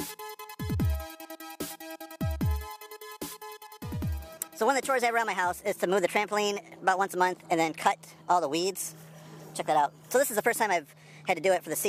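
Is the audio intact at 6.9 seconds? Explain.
No. At 6.9 seconds the audio plays with a wrong sample rate, and this lasts through the whole clip. The samples are run out faster than they were captured, with no conversion. Speed rises by a factor of 1.38, and pitch rises by about 5.55 semitones. Everything sounds sped up and raised in pitch together. That ratio fits audio recorded at 32 kHz being played back at 44.1 kHz.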